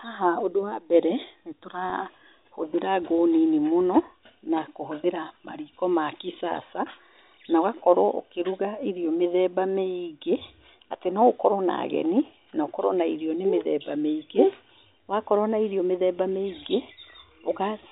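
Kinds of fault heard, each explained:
Packet loss with pitch repetition: about 20 ms lost just after "ũndũ wa mbere nĩ"; the last pitch period repeats, a brief buzzy hold rather than a silent click or gap.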